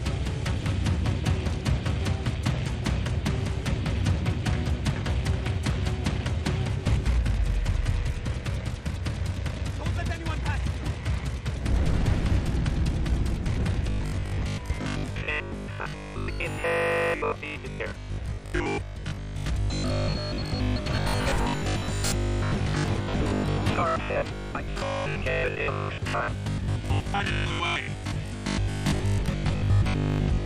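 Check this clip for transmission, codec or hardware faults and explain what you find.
One fault, starting at 13.9 s and lasting to the end: robotic sound from repeated short buffers. The audio hardens into a rigid, metallic buzz at 50 Hz that still loosely tracks the sound. The likely cause is audio arriving too seldom, so playback repeats the last 20 ms of audio for most of that stretch while the real audio is skipped.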